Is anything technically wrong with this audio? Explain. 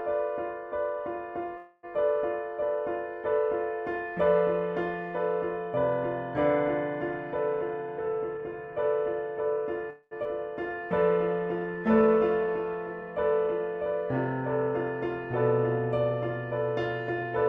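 Yes, there are four kinds of transmission faults.

A call audio freeze occurs at 1.57 to 1.85 s and again at 9.90 to 10.13 s. The last sound stretches into a fading buzz, ending in a brief silence the second time. Likely cause: delayed packets emptied the jitter buffer. Playback then resumes where it stopped, with nothing lost.

A jitter buffer speed-up runs from 7.61 to 9.58 s. Tiny pitch-period slices are cut repeatedly, about 150 ms in total. The sound plays roughly 6% fast at unchanged pitch and feels hurried.

A skip ahead occurs at 10.23 to 10.27 s. About 200 ms of audio is dropped while later audio waits. The two sides are spliced almost directly, so the sound jumps forward.

A jitter buffer slow-down runs from 10.69 to 13.6 s. Pitch periods and pause fragments are repeated, adding 206 ms. The sound plays about 7% slow at the same pitch, drawn out.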